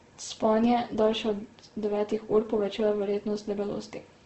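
From start to finish the speech sounds rough and grainy, with a hissy, noise-filled texture and nothing above about 8.3 kHz. This is likely heavy Opus compression in its music (CELT) mode at a very low rate, one that points to around 12 kbps. Starved of bits, the encoder keeps each band's energy but fills in detail with folded or synthetic noise. That is why there are fewer swirling holes than MP3 leaves behind, and mostly coarse grain instead.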